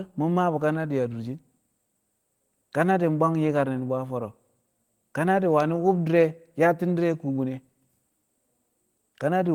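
Nothing here trips anything up: the speech runs along from beginning to end without a single technical fault to point to.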